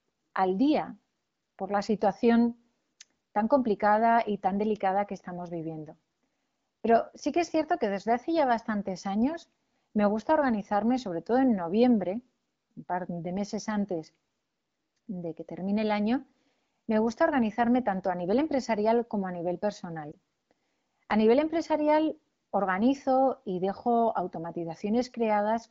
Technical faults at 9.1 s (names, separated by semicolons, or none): none